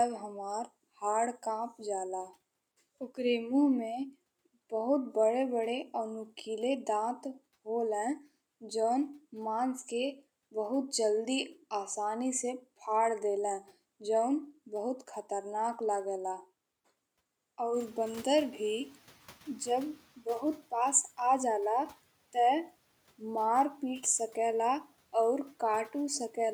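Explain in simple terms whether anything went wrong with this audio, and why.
Noise suppressor catching up, from 17.73 to 20.05 seconds. Shortly before this, around 17.5 seconds, the background noise in the room gets noticeably louder. The noise-reduction processing works from a running guess of how much noise is present, and that guess takes a moment to update. For about two and a third seconds the extra noise comes through with less reduction. Then the noise sinks as the suppressor adjusts.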